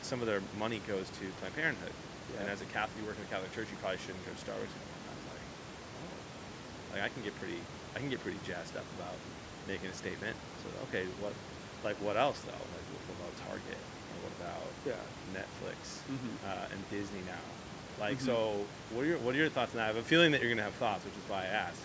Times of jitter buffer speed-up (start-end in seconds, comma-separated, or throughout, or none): none